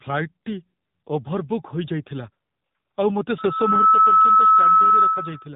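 An input gain set far too high for the microphone, with a fast limiter or compressor pulling it back down on each loud sound, is the likely cause of the gain pumping heard throughout the speech. The level swings by roughly 10 dB. Loud and soft passages sit unnaturally close together, and the whole clip sounds squashed and breathing.

Across the entire clip the speech has also passed through the AMR narrowband mobile codec. AMR-NB rebuilds the voice from a vocal-tract model excited by a handful of pulses per short subframe, and at the low rate this sound suggests, around 8 kbps, that model is stretched thin. Nothing above 3.8 kHz survives, leaving a boxed-in telephone band. The codec damage is plainly audible as a buzzy, synthetic edge on the voice.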